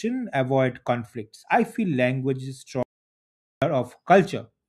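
At 2.83 s the speech cuts out abruptly and the track falls to silence until 3.62 s, an audio dropout to silence lasting about 0.79 s. There is no room tone or noise floor in the gap, only silence, so whatever was spoken in that stretch is lost. The pattern points to the input signal having been interrupted, likely a disconnected device, a failed link or a momentary mute, while recording continued to write empty samples.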